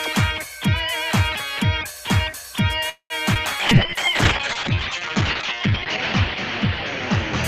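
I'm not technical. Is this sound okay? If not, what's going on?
No, there are three separate problems, all close together.

From 2.89 to 3.13 s there is a call audio freeze. The sound briefly hangs, turning into a short buzzy smear that fades out, with about 70 ms of near-silence at the end. Then it picks up exactly where it stopped. This was likely caused by pieces of the call arriving late. The key difference from the next problem is that nothing is lost. The sound is paused and then continues.

From 3.34 to 3.38 s there is a skip ahead, the opposite of a freeze. There is no pause. Instead roughly 70 ms of sound is simply gone, and the two sides are joined almost directly. It comes across as a tiny jump or stumble. A freeze adds a gap but keeps everything, while a skip removes a sliver of sound without adding any waiting.

From 3.63 s to the end there is a call bitrate drop. The sound never stops, but its quality falls sharply. 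It becomes muffled and rough, because the crisp detail above about 8 kHz is cut away. It stays at its worst for over two seconds. Unlike the first two problems, this one doesn't interrupt anything. The call connection simply began sending far less detail, and it hadn't recovered by the end.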